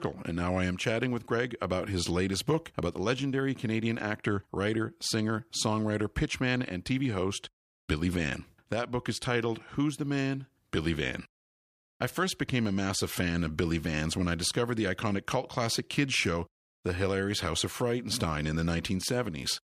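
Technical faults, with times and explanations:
No technical faults can be heard in this speech clip.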